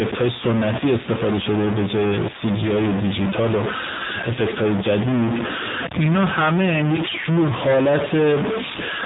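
Distortion runs through the whole clip, with hiss filling the pauses. This is a stuck bit, likely one converter data bit held at a fixed value. The speech also sounds thin and synthetic throughout, with nothing above 3.8 kHz, the mark of the AMR narrowband mobile codec at a low bitrate, fitting roughly 7.4 kbps.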